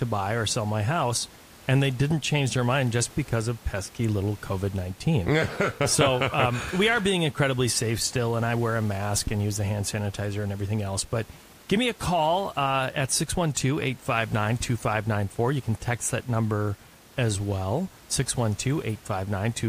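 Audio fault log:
No fault is logged for this speech audio.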